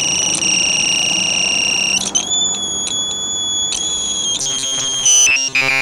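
From 4.41 s to 5.81 s, new audio likely arrived too seldom, so playback looped a roughly 7.5 ms buffer in place of most of the real signal. The result is robotic sound from repeated short buffers: a rigid, metallic buzz fixed at 134 Hz.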